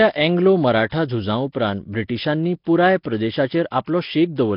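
Speech with a rough, hissy, underwater smear and nothing above 5.3 kHz, likely Nellymoser compression at a low bitrate; unlike plain low-pass filtering, noise fills the weak bands. Pre-echo appears at 1.52–1.55 s and 3.85–3.87 s: about 25 ms of hiss runs ahead of each attack, not after it as a reverb tail would.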